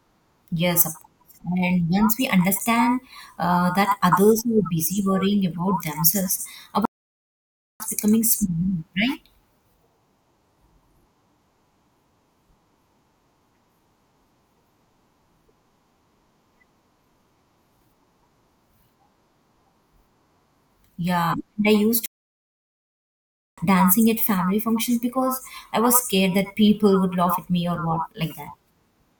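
Two stream reconnects: at 6.85 s, after "busy worrying about themselves", the stream cuts out for about 0.95 s and a fresh decoder picks up roughly 0.7 s further on. At 22.06 s, after "and I used", a 1.5 s gap follows before it resumes about a second later at "dancing at family functions".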